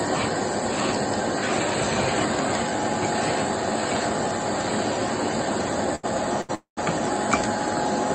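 Sound is held unnaturally long twice in quick succession, at 5.95 s for about 80 ms and at 6.41 s for about 75 ms, each with a faint buzzy smear before the audio resumes with nothing skipped. These are short stalls from a late packet: the jitter buffer ran dry, so the receiver stretched the last sound until the packet arrived. Right after, from 6.55 to 6.79 s, the sound freezes into a fading buzz that drops to silence for about 130 ms, then picks up where it left off. This call audio freeze, roughly 220 ms of filled time, likely comes from packets held up in transit and an emptied jitter buffer. Throughout, the call codec limits the top end to about 8 kHz, which fits Opus at around 48 kbps.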